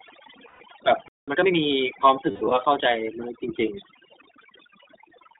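Overdone noise removal runs through the whole recording. Frequency bands judged to be noise have been pulled down almost to nothing, taking the quieter parts of the speech with them. The background drops and breaks up into twinkling specks.

iLBC codec coding also runs throughout. The speech is confined to roughly 250 Hz to 3.7 kHz, with nothing above, and each short frame's excitation is coded on its own, which fits the 15.2 kbps mode with 20 ms frames. The damage is plainly audible as a rough, slightly synthetic edge on the voice.

Lost iLBC frames appear first from 0.48 to 0.62 s, a 120 ms gap, which fits six missing 20 ms frames. The decoder fills it by repeating the last pitch cycle blended with noise, so a held, somewhat buzzy vowel sounds until the voice snaps back almost immediately.

A playback stall follows from 1.08 to 1.28 s. The audio cuts out mid-flow for about 190 ms, likely because the player ran short of data or its thread was blocked, and then resumes after the silent break.

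Time-compressed catch-up runs from 1.28 to 1.66 s as the player works off its backlog. It trims and cross-fades small slices to play at 1.5 times normal speed, so the speech sounds rushed at its usual pitch.

Lost iLBC frames return from 2.31 to 2.52 s. Here the losses are scattered across about 200 ms, with the longest unbroken run around a tenth of a second. That gives stretches of breathy, sustained concealment tone, each recovering cleanly once real frames arrive again.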